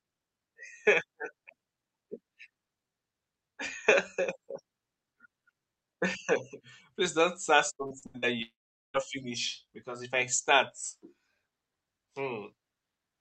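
Speech carried over a call codec path whose top end stops near 8 kHz. Between 7.75 and 8.25 s, repeated packet loss (robotic sound) cuts five holes, the longest 76 ms, and concealment fills nearly half the span with choppy sound with pieces missing. From 8.42 to 8.97 s the sound buzzes briefly, fades, then goes silent for about 0.43 s before resuming with material missing, likely a long network dropout.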